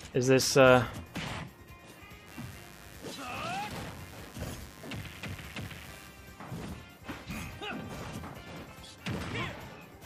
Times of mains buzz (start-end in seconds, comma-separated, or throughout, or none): 2.25-6.11